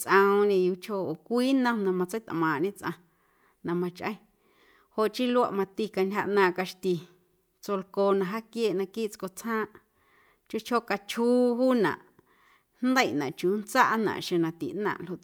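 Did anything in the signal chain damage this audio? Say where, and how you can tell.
No, nothing in the chain audibly damaged this speech.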